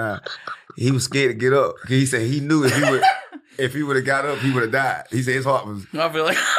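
No technical faults can be heard anywhere in the clip.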